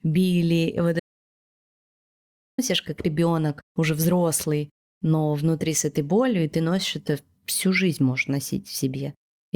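At 1.00 s, after "били вот", the speech drops to silence until 2.58 s, an audio dropout to silence losing about 1.59 s; likely a lost input. It resumes at "как ребенок уже взрослый".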